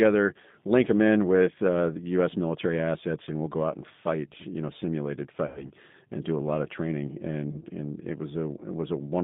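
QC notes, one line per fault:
throughout, G.729 codec: The speech sounds slightly rough and synthetic, with a plainly audible processed texture and nothing above about 3.7 kHz or below about 150 Hz. The damage comes from a low-rate codec that does not send the waveform. It sends a vocal tract filter, a pitch predictor and a few pulses per short frame, and the decoder rebuilds the sound from those. That fits 8 kbit/s G.729 over a narrowband telephone line.
5.46–5.70 s and 7.51–7.60 s, VoIP packet loss concealed by the speech codec: At 5.46 s the speech is stretched into a buzzy tone or coloured noise that fades, and it stays weak and distorted until about 5.70 s. A shorter blur of the same kind comes at 7.51 to 7.60 s. Audio went missing for 100 ms in the first event, which fits five lost 20 ms packets, and for 20 ms in the second. The decoder filled each gap by repeating its last pitch and filter at falling gain. 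Because each frame builds on the one before, the distortion lingers after the packets return.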